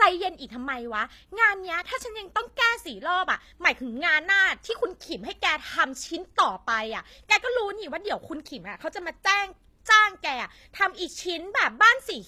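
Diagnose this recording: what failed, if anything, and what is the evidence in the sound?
Codec stage, across the whole speech recording: low-bitrate audio saved at a high bitrate. The speech carries coarse, smeared artefacts of a low-bitrate encoding, which likely fits an HE-AAC stream near 24 kbit/s later re-encoded as 192 kbit/s MP3. On a spectrogram, the upper band looks blocky, and the extra bitrate restores none of it.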